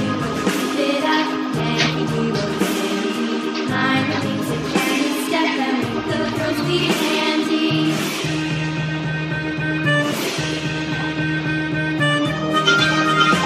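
No technical faults are audible anywhere in the recording.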